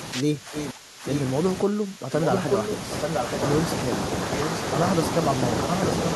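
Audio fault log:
0.23–1.05 s and 1.65–2.12 s, speech suppressed in double talk: the speech drops in level in pieces, by roughly 15 dB at its deepest, for around 0.7 s in the first span and half a second in the second. The likely cause is an echo canceller that, with both ends active, could not tell near speech from loudspeaker echo and attenuated everything, so the talker dips and breaks up instead of staying steady.
0.54–0.70 s, 1.10–1.21 s, 2.22–3.38 s and 5.69–6.13 s, echo leak: a copy of the speech returns 881 ms late. It is faint in the first scrap, somewhat quieter than the direct speech in the second and last, and about as loud as the speech across the long stretch from 2.22 s. This is likely loudspeaker pickup at the far end that its echo canceller did not remove, so the residual travels back down the line as a delayed repeat.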